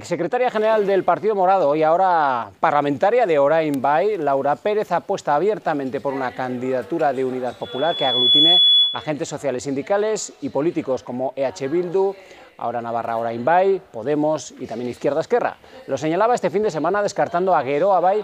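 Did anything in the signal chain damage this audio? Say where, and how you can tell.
Yes. There's loudspeaker feedback squeal on the analogue side, where the microphone is picking up a loudspeaker it's feeding. At 7.62 s a single tone around 3.4 kHz starts to swell, taking about three-quarters of a second to build, then sits roughly 5 dB above the rest of the sound until it drops out at 9.11 s. At that frequency the mic-to-speaker loop had gain above one, so the tone kept feeding itself until it was limited or the loop was broken.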